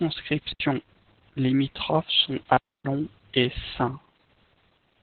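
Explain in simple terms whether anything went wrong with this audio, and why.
Two things went wrong. The whole recording has heavy Opus voice compression. The encoder was squeezed so hard that it kept only sound below about 4 kHz and described what remained crudely, so the speech sounds muffled, hoarse and slightly robotic, like an old phone line.

Between 0.39 and 0.60 s there is a wireless microphone squelch dropout. The radio signal weakened, hiss rose, and the receiver muted its output for roughly 80 ms, leaving a short hole before the speech returned.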